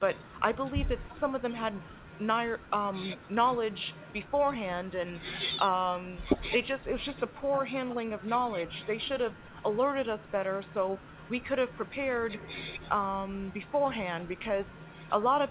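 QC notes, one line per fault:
No faults to log in this speech clip. The call path's narrowband character is audible, with nothing above 4 kHz, which fits a G.711 A-law telephone codec at 64 kbps.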